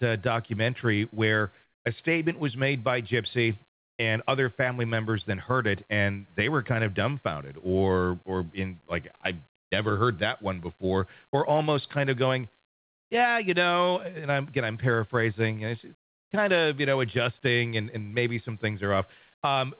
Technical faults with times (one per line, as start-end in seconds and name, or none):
1.64-1.85 comfort noise in place of the background